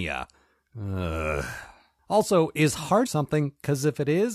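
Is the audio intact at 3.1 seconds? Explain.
No, a stream segment skipped at 3.05 s: the sound jumps ahead with a small blip, likely because one stream segment failed to load and playback continued from the next.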